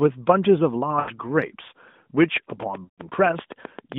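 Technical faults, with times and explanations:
0.99–1.11 s, lost AMR speech frames: For about 80 ms the sound smears and sags, which fits four dropped 20 ms frames. The decoder filled the gap by repeating the last good pitch and vocal-tract settings at falling gain. It gives a short warbling dip, then the sound returns rough for a moment.
2.24–3.93 s, train of clicks: About fifteen similar clicks tick over the sound at a steady 7.7 per second. They stand out through pauses, peaking roughly 10 dB above the sound. The even spacing and matching shape point to likely interference from nearby equipment.
2.84–3.01 s, lost AMR speech frames: This gap is longer, about 140 ms, which fits seven lost frames. The concealment repeats the stale settings, so the sound stretches and fades toward silence before recovery. It comes back weak and rough, with clicks still ticking over it, all within the narrowband 150 Hz to 3.6 kHz line.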